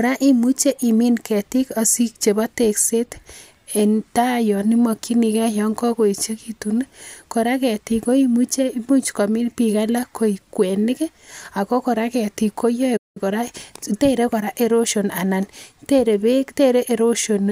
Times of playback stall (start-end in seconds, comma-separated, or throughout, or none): 12.96-13.17